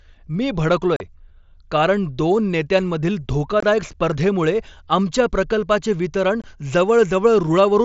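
Speech over a wideband mSBC Bluetooth headset link, with unconcealed Bluetooth headset packet loss at 0.96–1.01 s (about 38 ms), 3.60–3.63 s and 6.42–6.44 s (about 23 ms each). Lost voice packets were replaced by silence or an idle pattern rather than patched over, leaving abrupt-edged holes whose lengths fit runs of 7.5 ms frames.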